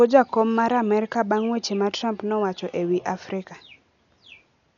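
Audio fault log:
Throughout: Dolby Digital compression, likely the cause of the heavy damage heard here. Nothing sounds above 7 kHz, so the speech is dull, and starved frequency lines filled with dither noise leave a rough, fluttering haze around voiced tones, which fits a bitrate near 48 kbps.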